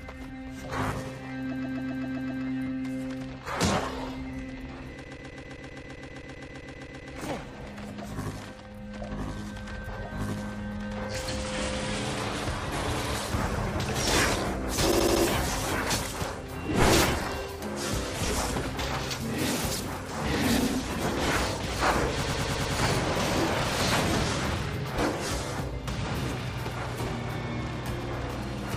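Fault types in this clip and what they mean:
repeated frames: at 1.50, 5.03, 14.90 and 22.22 s, compressed blocks of 78 to 131 ms are decoded again and again, stuttering and lengthening the audio.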